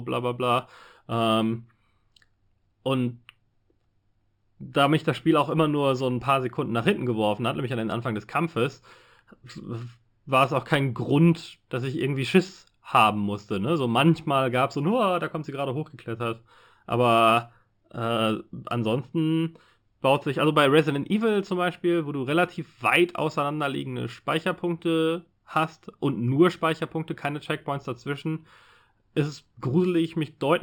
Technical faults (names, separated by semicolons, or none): imaging from linear upsampling